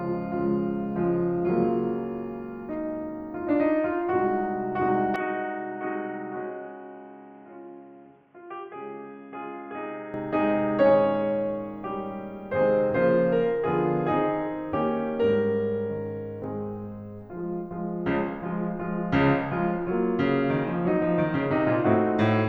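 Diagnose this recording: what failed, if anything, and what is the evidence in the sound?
From 5.16 s to 10.14 s the music turns boxy, with nothing above 3.4 kHz, a drop of roughly 10 dB and new noise about 35 dB down, without any gap. At the driver stage, the input likely switched to a poorer device.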